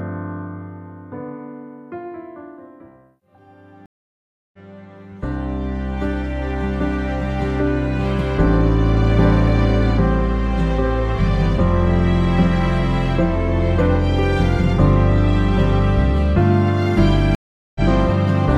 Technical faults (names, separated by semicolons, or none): stream reconnect